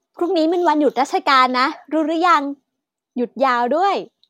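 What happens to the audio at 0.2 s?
Nothing goes wrong at 0.2 s; the speech is intact at that point, with no dropout, click or distortion.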